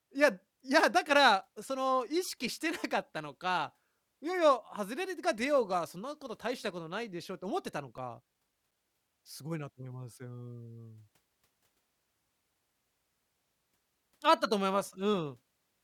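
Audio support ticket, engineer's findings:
CD scratch ticks, 7.98–9.26 s: eight short ticks, roughly six per second, uneven in strength; each only a few milliseconds. Disc surface damage beyond error-correction capacity, once per revolution; player interpolating or muting the lost samples in the speech.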